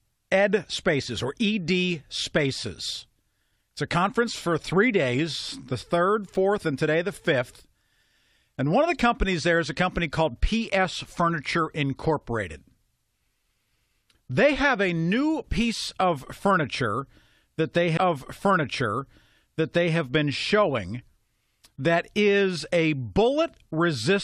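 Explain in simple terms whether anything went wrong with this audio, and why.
Something did go wrong: at about 17.96 s the speech jumps back and plays roughly two seconds of itself again, running until about 19.96 s, with a small blip at the jump. This is a stream segment repeated: the player fetched or lined up the same chunk of the stream twice. Unlike a stutter, which repeats tiny fragments over and over, here a whole stretch plays once more in full, adding about 2.0 s.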